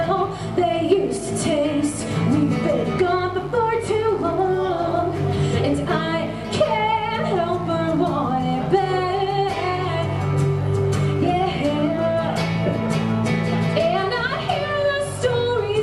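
From start to finish there's a mains buzz riding under the audio: a steady, raspy 50 Hz drone sitting around 20 dB below the signal. Switching spikes from something like a dimmer or an unshielded run are getting in, so harmonics stack up well into the kilohertz range.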